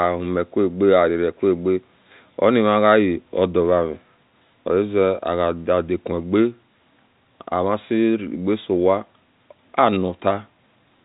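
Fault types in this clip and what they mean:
No faults can be heard in this speech clip. It comes through the G.711 telephone coding path, so the band stops at about 3.8 kHz, the usual ceiling of a telephone line.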